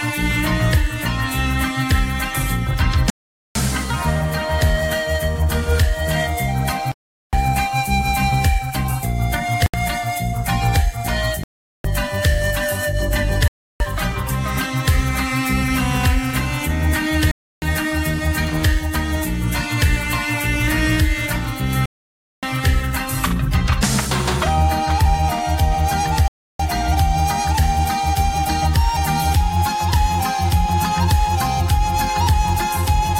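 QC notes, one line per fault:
3.10 to 26.60 s, Bluetooth stall: the audio drops to dead silence and then resumes at 3.10 s (0.45 s gap), 6.92 s (0.41 s), 9.66 s (74 ms), 11.44 s (0.41 s), 13.48 s (0.32 s), 17.31 s (0.31 s), 21.86 s (0.57 s) and 26.28 s (0.32 s). The likely cause is packets held up over the wireless link, so the receiving buffer ran empty and output simply stopped until data came through again.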